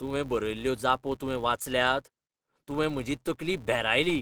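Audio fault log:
throughout: filter restarted on every block, losing its state each time, so every block opens with a tick, forming a 172 Hz buzz that follows the speech level.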